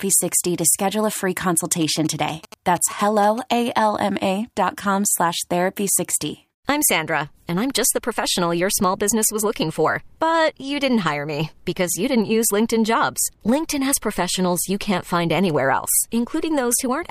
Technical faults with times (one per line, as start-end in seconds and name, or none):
1.82-3.39 GSM signalling bursts